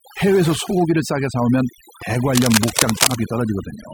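Speech with overdone noise removal throughout: the reduction is set so hard that bands near the estimated noise floor are pulled down or switched off, taking quiet speech detail with them. The background drops and breaks up into twinkling specks. From 2.29 s to 3.18 s there is cable scratch noise, dense irregular scratching and rustling roughly as loud as the speech itself. It is likely caused by a worn cable, connector or control being moved.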